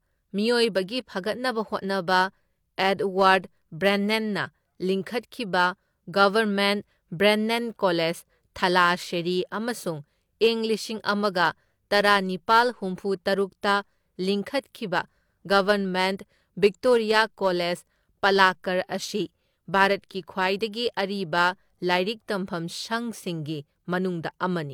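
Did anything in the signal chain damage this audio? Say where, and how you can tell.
No, nothing in the chain has audibly damaged this speech recording; every stage it passed through left the signal intact.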